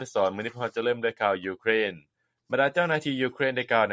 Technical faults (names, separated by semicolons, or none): none